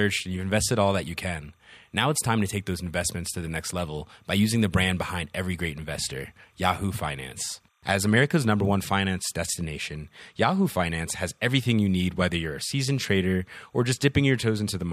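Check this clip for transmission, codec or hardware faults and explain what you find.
Timecode bleed runs through the whole speech recording: linear timecode from an adjacent track or cable has leaked into the audio path. Its square wave flips between tones around 1 and 2 kHz at the 29.97 frames-per-second code rate, leaving a faint chirping warble roughly 45 dB below the speech.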